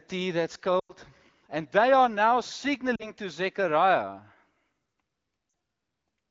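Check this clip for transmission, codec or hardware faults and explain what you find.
There is one fault: lost AMR speech frames, at three points. The AMR wideband coding underneath sounds clean, with only light damage, which fits a rate around 16 kbit/s.

The first dropout runs from 0.80 to 0.93 s, after "tea that's". The second runs from 2.95 to 3.12 s, after "they are now". The third runs from 5.49 to 5.53 s. Radio errors corrupted these frames, so the decoder repeated its last good pitch and vocal tract settings at falling gain. The first gap fits about five 20 ms frames, so the sound drops to near silence within two frames. The shorter gaps fit about two frames and drop toward near silence. Each time, the speech returns weak or rough for a moment.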